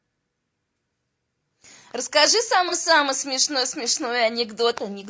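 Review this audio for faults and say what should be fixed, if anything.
Low-delay AAC compression, throughout: the speech sounds rough and grainy, with noise filling the gaps between harmonics and a thin, synthetic-sounding top band. The likely cause is AAC-ELD's short frames, which resolve pitch poorly and spend bits inefficiently; the damage fits a low bitrate of around 32 kbps. To prevent it, raise the bitrate or use a longer-frame codec where latency allows.

AAC frame loss with concealment, from 2.69 to 2.74 s: a brief smeared, noisy patch interrupts the speech where the decoder filled a gap by reusing the last good spectrum with altered phase, consistent with a single lost frame. To prevent it, add forward error correction or a larger jitter buffer on the transmission path.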